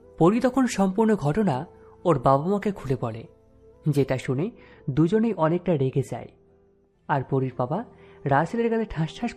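De-emphasis applied wrongly affects the audio from 4.23 s to the end of the clip. At that point the sound turns dull and muffled, as a treble-cutting de-emphasis curve takes hold, either on material that was never pre-emphasised or a second time on material already corrected. The response rolls off smoothly with rising frequency, reaching about 13 dB down at 10 kHz relative to 1 kHz. That loss removes the brightness and air from the top end.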